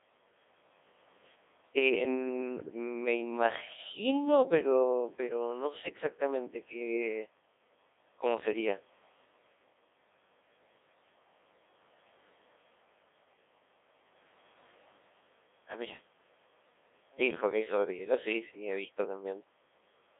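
From start to finish the speech passes through the Codec 2 vocoder, and the damage is heavy. Only pitch, voicing, energy and a spectral outline survive, and the decoder rebuilds the voice from sine waves. The result is a robotic, buzzy tone confined to roughly 300 Hz to 3.6 kHz, with a coarseness that fits a rate near 1.6 kbit/s. A waveform codec at low bitrate smears and warbles. Here the original waveform itself is gone.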